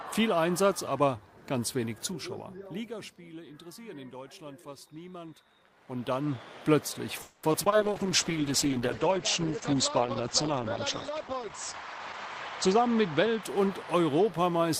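Call audio freeze at 7.21 to 7.49 s: the sound stalls and the last moment stretches into a fading buzz for about 220 ms, likely from packets held up until the jitter buffer ran dry. Nothing is lost, but the rest arrives 220 ms late.

Short concealed packet loss at 7.52 to 7.56, 7.64 to 7.68 and 7.70 to 7.74 s: each time 20 ms never reached the decoder, and the patched-in guess is heard as a brief smear or wobble.

Call bitrate drop from 7.82 to 14.21 s: the encoder falls from 48 to 9 kbps, bandwidth shrinks from 20 kHz to 8 kHz, and the audio turns muffled and watery, at its worst for about 4.1 s.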